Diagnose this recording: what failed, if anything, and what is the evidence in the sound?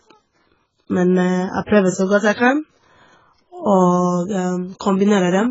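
The speech sounds dull and smeared from start to finish, with a watery, warbling texture on sustained sounds and a fizzy, swirling edge on sibilants. Nothing survives above about 7.7 kHz, so the top of the spectrum is simply gone. The stage is the codec, likely AAC compression (AAC-LC) at a very low rate, fitting roughly 12 kbps. Starved of bits, the encoder lowers its cut-off, quantises the remaining bands coarsely, and leaves gaps that shift frame by frame, producing the warble.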